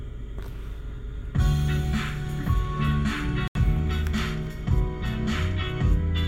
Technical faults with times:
3.48-3.57 Bluetooth stall

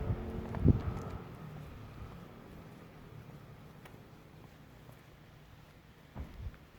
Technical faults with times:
2.43-4.43 adaptive stream at a lower bitrate

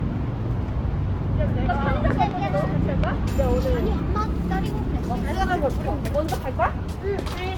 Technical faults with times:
0.00-7.58 generation loss
2.10-2.33 loud pop
3.04-3.06 loud pop

